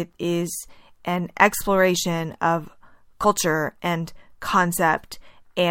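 At 3.23 s, just after "is an exploration of", compressed frames are skipped. A few whole frames never play. They were either missing or rejected by the decoder as damaged. The speech jumps forward by about 70 ms, which fits a short run of frames of about 23 ms each. The join is heard as a brief blip where the audio lurches ahead. Depending on the codec, that blip may be smeared or a hard click.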